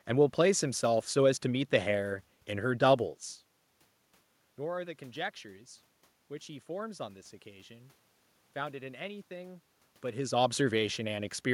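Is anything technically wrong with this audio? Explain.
No, nothing's technically wrong here; the background noise is just the room the microphone was in, and the level shifts around 3 seconds and again near 10 seconds are only the talker moving relative to the mic.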